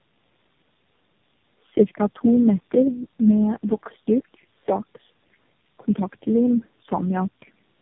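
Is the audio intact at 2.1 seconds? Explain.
No. At 2.1 seconds, as throughout the clip, there is tandem speech coding: the speech passed through four low-rate speech coders in a row, each re-encoding the previous one's damage. It sounds rough, muffled and warbly. A spectrogram shows a hard ceiling near 3.7 kHz and smeared harmonics.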